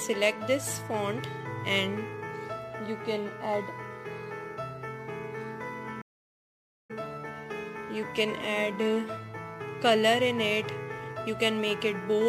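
The stream connection dropped at 6.02 s and the player had to reconnect and start a new decoder partway through the stream, a classic stream reconnect. The sound cuts to silence for 880 ms, and when it returns at 6.91 s it picks up roughly half a second further on than where it stopped. That portion of the audio is skipped, so the material on either side of the gap doesn't join up.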